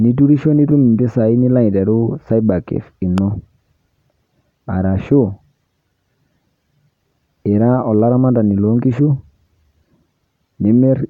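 A sudden voltage pulse, likely from a plug, switch, static discharge or driver glitch, entered the signal chain of this speech clip and produced a single loud pop from 3.18 to 3.20 s. It peaks around 10 dB above the speech, which continues underneath.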